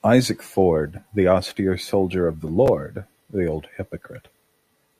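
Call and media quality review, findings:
Chunks out of order in the speech at 2.66 to 2.68 s: brief jumbled moment. Likely the playback buffer: a 5.33 ms chunk (fits 256 samples at 48 kHz) landed three chunks late, so nothing's missing, just reshuffled across three hard joins.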